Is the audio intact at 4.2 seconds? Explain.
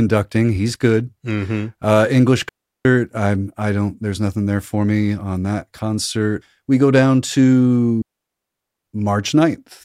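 Yes, at 4.2 seconds the speech plays through intact, with no audible fault at that moment.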